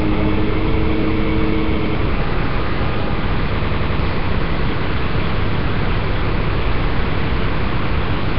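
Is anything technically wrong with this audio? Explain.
Yes. The recording of everyday sounds has three problems: codec damage throughout, a brief dropout, and two stutters.

Nellymoser compression, throughout: the audio has a rough, hissy haze and a smeared, underwater character, with nothing above 5.3 kHz. The likely cause is heavy Nellymoser Asao coding at a low rate, around 22 kbps. That codec starves weak bands of bits and fills them with noise.

Underrun with held sample, at 1.02 s: for about 1.45 ms the output buffer ran dry and the converter held its last value. The waveform flattens briefly. Playback then resumes where it stopped, with nothing lost, so the interruption passes almost without a click.

Repeated buffer, from 1.86 to 1.95 s and from 3.62 to 4.00 s: new audio arrived late, so the device replayed its last 92.88 ms block. This fits a 4096-sample buffer. The block plays once extra at the first point, costing roughly a tenth of a second of sound. 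At the second point it plays four extra times, costing roughly 0.4 s. Each repeat joins hard, giving an audible stutter.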